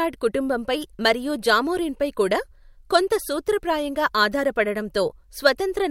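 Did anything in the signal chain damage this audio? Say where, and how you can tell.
No, nothing in the signal chain audibly damages this speech recording. No stage, from capture through to playback, leaves a mark that can be heard.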